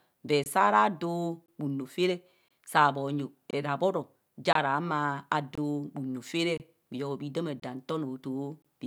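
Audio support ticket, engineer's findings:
Gap between chunks: speech cut by short silent holes with hard edges, each about 23 ms, recurring regularly from 0.44 s to 8.62 s, one per second of audio (e.g. between "rabbor o ja" and "ra humo" at 4.53 s). Probable component: chunked playback or storage, with padding at each 1 s join. A 23 ms hole fits 1024 samples at 44.1 kHz. Unlike a dropout, nothing is lost; speech resumes exactly where it stopped.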